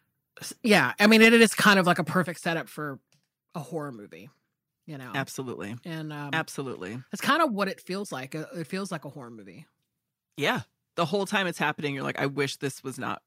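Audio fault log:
0.74–1.73 s, microphone overload: The loudest syllables in this stretch carry a harsh, crackly edge that ends just before "of like a". The peaks run about 5 dB past the converter's ceiling, and a small share of samples get their tops sheared flat. The likely cause is input gain set too high at the microphone. Flattened peaks add sharp harmonics that the original sound never had, and that gives the gritty texture.
1.25 s and 2.25 s, microphone volume stepped down: The level drops suddenly twice. Both the voice and the background fall together. The first step is small, about 2 dB, and comes while the overload is still sounding. The second is larger, about 7 dB, and lands between "of like a" and "setup for a horror". The likely cause is call software detecting the clipping and lowering the device's input volume in single steps.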